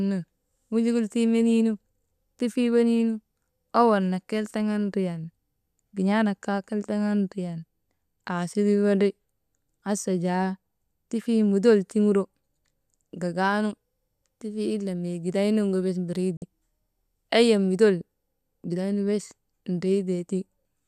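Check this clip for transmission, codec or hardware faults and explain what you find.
The speech drops briefly into silence from 16.37 to 16.42 s, right after "gideynuŋgu bes", with a 3 ms fade at the edge. This is a digital broadcast dropout: the receiver muted over corrupted or missing frames, a gap that fits about two lost frames, so that sound never arrives.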